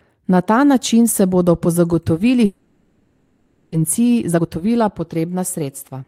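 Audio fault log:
2.45–3.76 s, long network dropout: the last sound before the gap is drawn out as a fading buzz for about 1.3 s, never falling to silence. Nearly a second of audio is simply gone when sound resumes, most likely from a stall in arriving packets. A short concealed loss would recover within a few tenths of a second.
3.84–6.05 s, jitter buffer speed-up: the sound runs about 14% fast but keeps its original pitch, because slices of one or a few pitch periods are cut out repeatedly. This sheds roughly 0.3 s of delay that built up during the dropout. A sample-rate error would raise the pitch as well.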